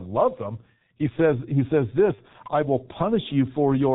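Throughout the speech, the G.723.1 codec audibly limits the signal: nothing survives above 4 kHz, and the slowly updated vocal model leaves the voice muffled and hoarse, with smeared consonants. The heavy degradation fits its 6.3 kbit/s mode.

From 2.15 to 2.22 s, between "says he says" and "I will", VoIP packet loss concealed by the speech codec appears. The decoder extends its last pitch and filter, producing a short stretch of buzzy tone or coloured noise that fades, consistent with one lost 30 ms frame.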